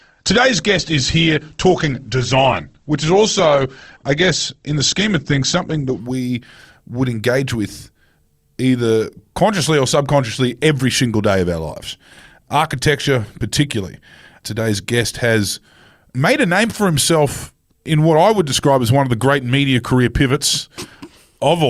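Speech, opening with an adaptive stream starting at a low bitrate. From 0 to 6.0 s the sound is dull and smeared, with nothing above about 8.2 kHz and heavier codec artefacts, which points to a low-bitrate Opus rendition near 16 kbit/s. At 6.0 s the full treble returns abruptly, with no gap, fitting a step up to around 64 kbit/s. A mid-stream bandwidth collapse would drop quality later. Here the clip begins degraded and then improves.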